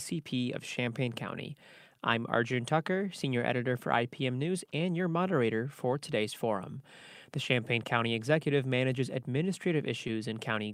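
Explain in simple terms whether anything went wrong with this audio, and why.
There's clock drift between sender and receiver: the sender's clock runs slow, by roughly one and a half percent, so the receiver keeps running short of audio.

To cope, it makes repeated timing corrections from 0.14 to 10.69 s, padding out short pieces so the sound plays at 99% speed, stretched by roughly 150 ms overall.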